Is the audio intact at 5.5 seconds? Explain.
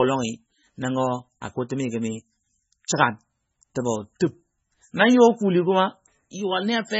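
No, MP3 compression damage runs through the whole clip, including 5.5 s. Likely starved of bits, the encoder removed everything above 7.6 kHz, leaving watery, swirling speech that fits roughly 16 kbps.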